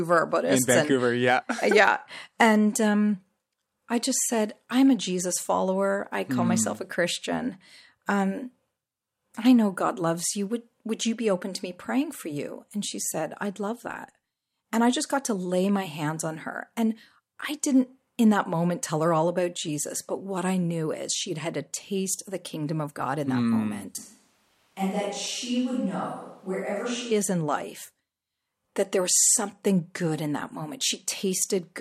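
From 23.98 to 27.11 s the speech abruptly turns hollow, roomy and about 5 dB quieter. This is likely a switch to a distant microphone.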